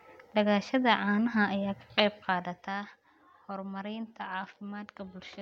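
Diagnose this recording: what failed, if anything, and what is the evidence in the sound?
Zipper noise runs from 1.96 to 3.0 s, a fast ticking over the speech while the level falls by about 10 dB. The gain stage applies the fade in coarse, unsmoothed jumps, roughly twenty a second, likely once per buffer, so each jump clicks.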